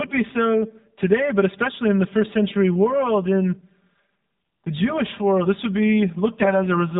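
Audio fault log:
Throughout: channel delay (comb filtering). One channel arrives about 5 ms behind the other before the two are summed to mono. Energy common to both channels cancels at evenly spaced frequencies. The first notch sits around 100 Hz, and further notches follow at regular steps above it. The speech sounds hollow and phasey. Parts of its body are scooped out at fixed points in the spectrum.
Throughout: AMR narrowband mobile codec. The speech passes through AMR-NB at a low mode, which fits a rate near 7.4 kbps. Nothing above 4 kHz survives, so the top end is sharply cut off. At so few bits, the voice model is driven by sparse pulses. The voice comes out buzzy and synthetic. The codec damage is plainly audible across the whole clip.
6.40–6.54 s: AMR bit errors. For a short burst of a few frames, the less protected bits arrive corrupted, roughly one bit in ten. The checksum on the core bits still passes, so the frames are decoded anyway. 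The excitation pulses land in wrong places, and the fine gain and spectral detail are off. Pitch and level hold roughly steady, but the voice turns hoarse, scratchy and gargly.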